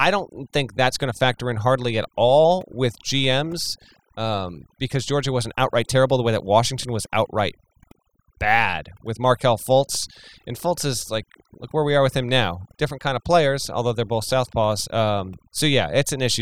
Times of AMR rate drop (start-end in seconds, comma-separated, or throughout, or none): none